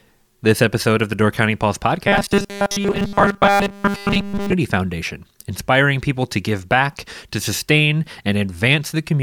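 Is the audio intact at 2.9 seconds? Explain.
No. From 2.08 to 4.53 s the speech turns into a rigid, metallic buzz at a fixed 200 Hz that follows the original only roughly. This is robotic sound from repeated short buffers, likely caused by new audio arriving too seldom, so a slice of about 5 ms is replayed over and over for most of that stretch while real audio is skipped. Unlike a steady mains hum, the buzz exists only within this span.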